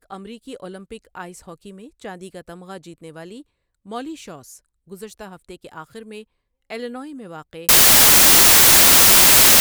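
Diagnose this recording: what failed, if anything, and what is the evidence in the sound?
The speech holds up until 7.69 s, then collapses into loud, harsh broadband noise, close to white on the louder passages, that runs to the end of the clip. That points to the sample-format conversion stage: samples built from the wrong bytes, with the reader misaligned or swapping byte order so the rapidly changing low bits land in the high part of each value. A spectrogram shows flat, full-band energy from 7.69 s onward; the waveform jumps to large, random-looking amplitude.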